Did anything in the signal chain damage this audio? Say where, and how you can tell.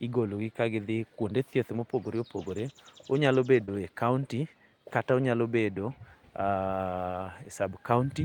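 Yes. Network losses, lost packet rebuilt from error correction at 1.77 s just after "kuonde thieth", 2.69 s and 3.68 s: single 20 ms frames turn briefly rough and noisy without any gap, because the decoder played the low-bitrate copy carried in the next packet.

Short concealed packet loss at 3.65–3.70 s: a brief smear where about 22 ms was extrapolated from the preceding sound and blended back, unlike the rebuilt frames, which keep their own content.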